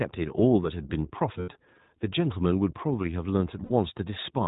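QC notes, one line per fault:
Throughout: iLBC codec. The speech is band-limited to narrowband, with nothing heard above 4 kHz, so sibilants and breath lose their edge. Each short frame's excitation is coded on its own, without help from the previous one, and the damage is plainly audible as a rough, slightly synthetic grain on the voice. The character fits iLBC's 20 ms frame mode, at roughly 15 kbps.
1.40–1.49 s and 3.64–3.71 s: lost iLBC frames. Two gaps, 80 ms and 60 ms long, which fits four and three missing 20 ms frames. At each gap the decoder conceals the loss by repeating the last pitch cycle blended with noise, so the audio turns into a brief held, buzzy, breathy vowel. Because each frame decodes independently, the voice snaps back to normal as soon as packets resume.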